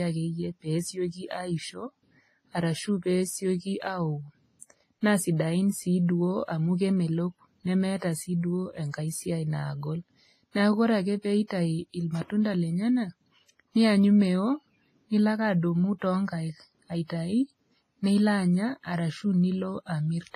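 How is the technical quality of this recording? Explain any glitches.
The speech has a cut-off top end and the smeared, watery texture of heavy compression throughout. It sounds like low-bitrate audio saved at a high bitrate. Nothing reaches above 15.2 kHz, and the leftover artefacts point to a very low-bitrate earlier encoding, likely WMA, later re-saved as high-bitrate MP3 that cannot restore what was lost.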